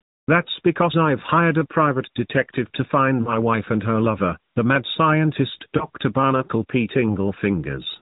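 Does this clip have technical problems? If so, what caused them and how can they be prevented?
Yes. Lost AMR speech frames cause brief damage at 3.22 to 3.34 s and 5.78 to 5.85 s. Radio errors corrupted frames, and the decoder filled them by reusing the last good pitch and vocal-tract settings at falling gain. The first event sounds drawn out and fading, fitting about 40 ms of loss. The second is a shorter dip or warble, fitting one 20 ms frame. Unlike a hard dropout, the sound is smeared onward rather than cut with a click, while the band-limited, slightly synthetic AMR narrowband mobile codec character runs throughout. Stronger radio coverage or error-protected transport would prevent it.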